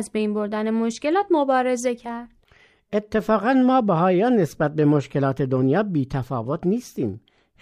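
Nothing goes wrong anywhere in this bit of speech, so there's no fault to point to at any moment.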